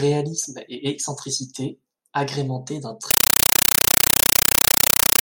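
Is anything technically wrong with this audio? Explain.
Yes. From 3.11 s to the end, right after "et excentricité agrémentés d'un", the speech is replaced by a compressed stream played as audio. A Dolby Digital bitstream reached the output undecoded, so its coded frames were reproduced as if they were ordinary samples. Each frame becomes an 8 ms burst of noise followed by zero padding, repeating 31.25 times a second, a pattern that fits an AC-3 stream at 384 kbps. The result is very loud, chattering static.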